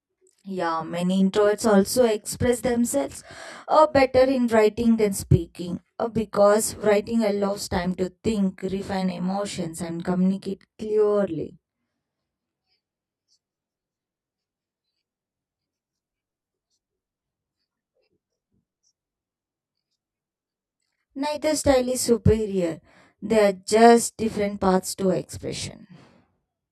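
Speech, with channel delay (comb filtering) present from start to finish. One channel arrives roughly 20 ms behind the other, and when the two are folded to mono the shared content cancels at regularly spaced frequencies. The first notch sits somewhere around 20 Hz, with further notches repeating at close, even intervals up the spectrum. The fixed pattern of dips leaves the voice sounding rough or slightly doubled for the whole clip.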